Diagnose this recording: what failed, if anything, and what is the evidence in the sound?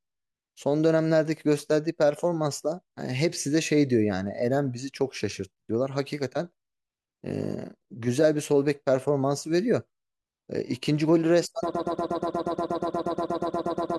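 A broken-record loop kicks in at 11.74 s and runs to the end. The same 0.12 s slice of speech repeats back to back 19 times, and whatever should have followed is gone. That's likely a stalled player or stream buffer resending the last fragment it held.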